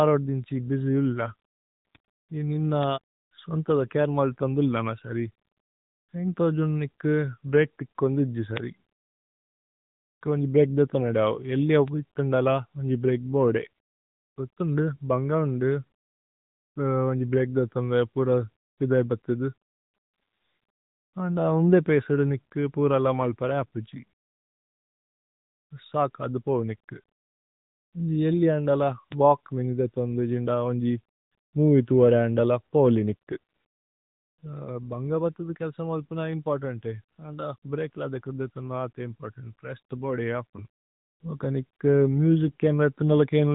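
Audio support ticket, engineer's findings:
AMR narrowband mobile codec, whole clip. Speech band-limited, nothing above 4 kHz. Voiced sounds buzzy and synthetic, with plainly audible coding damage. Probable component: mobile voice path encoding at 8 kHz. Mechanism: vocal-tract model excited by a few pulses per 5 ms subframe, so fine detail is replaced by a parametric approximation. Degree of damage fits a mid-rate AMR-NB mode, around 10.2 kbps.

Bit error spikes, four events: 2.83 s (after "നി നിന"), 8.57 s, 11.88 s (between "ദാവു ഏല്ലിഅ" and "വിഥന്ദല വന്ജി ബ്രേക് ബോദേ"), 29.12 s. Each is a single sharp broadband tick, unrelated to the speech. Probable component: memory or digital link. Mechanism: a flipped bit jumps the sample value by a power of two and it returns immediately. The click lengths fit one or two corrupted samples.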